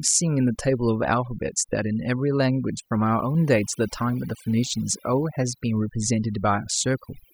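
Overdone noise removal runs throughout this speech clip: aggressive noise reduction shuts off quiet frequency bands, leaving twinkling specks in near-silent gaps.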